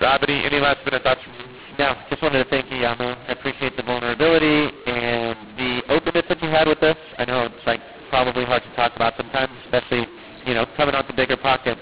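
From start to finish, the speech carries a mu-law and A-law mix-up. It was coded as A-law G.711 telephone audio and then decoded as mu-law. The two logarithmic curves disagree, so sample levels come out scrambled. Some are too loud and others too quiet. The quietest samples rise well above silence. The result is harsh, gritty distortion over the voice, and the pauses fill with hiss. The narrow band under 4 kHz points to normal telephone-rate coding.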